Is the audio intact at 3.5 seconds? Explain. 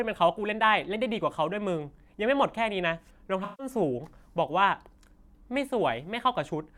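No. From 3.44 to 3.67 s the speech passes through AAC frame loss with concealment. Roughly 150 ms of coded audio never reached the decoder, which fits about seven lost frames. The decoder covered the hole by reusing the last good spectrum with randomised signs and smoothed energy. The result is a smeared, noisy, phasey patch rather than silence. That sets it apart from a plain dropout, which would leave an abrupt gap, or from a click at the boundaries.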